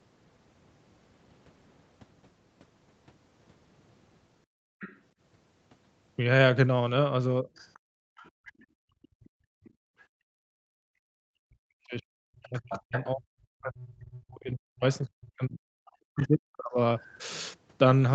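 Background gated by the echo canceller, 4.46 to 4.79 s: while the loudspeaker played, the canceller clamped the microphone, and the room tone drops by up to about 32 dB for roughly a third of a second.

Other side's voice leaking through, 4.79 to 4.99 s: a faint second voice, about 20 dB below the talker, slips past, likely because echo cancellation left some loudspeaker pickup behind.

Speech suppressed in double talk, 7.42 to 7.48 s: the talker's voice dips by about 15 dB for a brief instant, likely because the canceller mistook overlapping speech for echo.

Other side's voice leaking through, 7.55 to 10.02 s: a very quiet far-end voice, about 30 dB down, persists underneath as residual echo the canceller likely failed to remove.

Background gated by the echo canceller, 7.79 to 10.87 s: the microphone is held down for about three seconds, and the background falls away by up to about 36 dB before returning.

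Speech suppressed in double talk, 11.15 to 16.79 s: across roughly five seconds the talker's voice repeatedly sinks, at worst by about 40 dB, likely as the canceller attenuated everything while both sides spoke.

Other side's voice leaking through, 12.58 to 13.04 s: the far-end voice becomes clearly audible, only about 10 dB under the talker, likely leaking from the loudspeaker.

Other side's voice leaking through, 16.21 s: a short scrap of the other side surfaces, about 25 dB down, likely residual echo.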